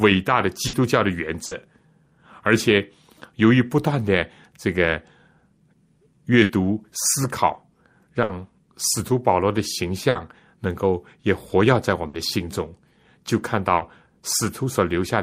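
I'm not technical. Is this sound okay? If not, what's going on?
No. Seven times the speech briefly smears into a short held buzz or fading hiss and skips ahead, at 0.67, 1.45, 6.43, 8.23, 10.09, 12.07 and 13.75 s. This is a burst of packet loss: about 60 ms of audio never arrived, so the receiver stretched the last sound to cover the gap.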